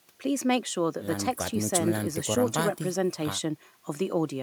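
No technical faults can be heard anywhere in this speech recording. There is no point in it that needs to be marked.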